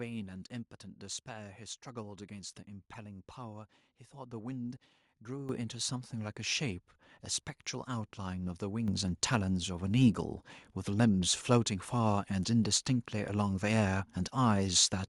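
At 5.49 s and 8.88 s, the microphone volume is stepped up, by about 10 dB then about 7 dB. Voice and background jump louder together.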